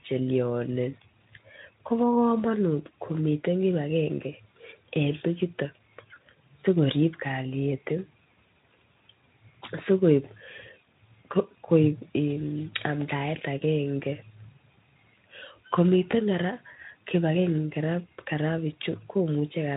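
Speech clip carried over a Speex link, whose light coding damage sits in the background, with two brief dropouts from VoIP packet loss concealed by the speech codec, at 6.13 to 6.18 s and 16.11 to 16.15 s. Each gap matches about 20 ms of missing audio, consistent with a single lost frame. The decoder fills it by extending its last pitch and spectral shape at falling gain, so the sound briefly smears into a fading buzzy tone or coloured noise and stays weak or distorted for tens of milliseconds after the stream resumes.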